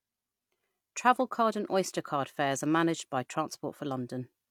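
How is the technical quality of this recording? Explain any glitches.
The technical quality of this recording is sound, with no glitches to explain.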